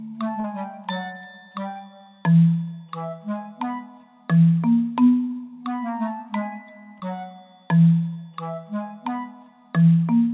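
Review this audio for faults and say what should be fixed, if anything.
Short concealed packet loss occurs three times: 0.40 to 0.46 s, 7.00 to 7.03 s, and 8.13 to 8.17 s. The first gap is about 40 ms; the other two are about 20 ms each. Audio arrived too late for the decoder. The receiver filled each hole by stretching the preceding sound, then blended back into the real signal. Each spot is heard as a brief smear or wobble. The call band stops at 4 kHz, which fits G.711 A-law. Prevent this by giving the network path more headroom or a deeper jitter buffer.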